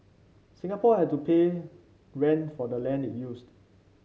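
No technical faults are audible.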